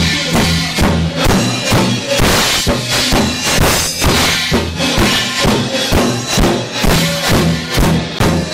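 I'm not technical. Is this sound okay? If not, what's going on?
No, there's one glitch: at 8.19 s the sound drops out for a split second, then carries on. That's likely a Bluetooth stall, where the wireless link briefly hiccupped.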